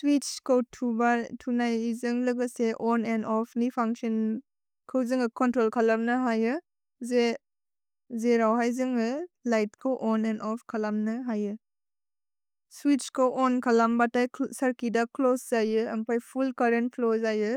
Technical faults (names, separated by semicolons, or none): crude rate conversion